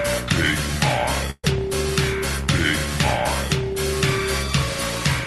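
A call audio freeze runs from 1.30 to 1.44 s: about 130 ms of fading fill ends in a brief silence, then the audio resumes unbroken, likely because late packets emptied the jitter buffer.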